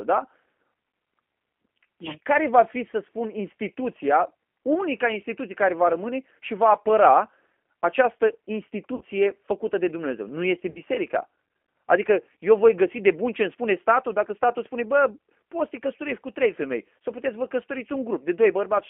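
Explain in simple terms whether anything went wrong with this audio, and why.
Two things went wrong. First, the call passed through the G.729 codec, a low-rate phone codec that rebuilds speech from a rough model of the voice. It keeps only the band from about 250 Hz to 3.4 kHz, so the speech sounds thin, slightly rough and synthetic throughout.

Second, there is VoIP packet loss concealed by the speech codec at 8.95 to 9.02 s and 10.70 to 10.80 s. Each time, about 60 ms of audio never arrived. The decoder filled the gap by stretching the last sound it had into a fading buzzy tone or coloured noise, and the voice stayed weak briefly afterwards.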